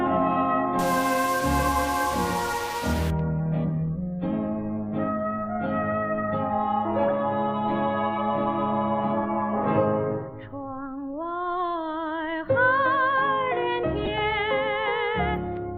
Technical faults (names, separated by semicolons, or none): stuck bit; corrupt frame decoded